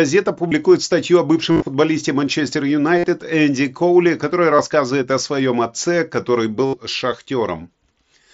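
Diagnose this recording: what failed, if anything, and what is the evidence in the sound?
Concealed Bluetooth headset packet loss on the wireless link. Buzzy held patches occur at 0.48, 1.51–1.65, 2.98–3.04, 4.56 and 6.66–6.74 s. Lost packets are replaced with recycled recent waveform.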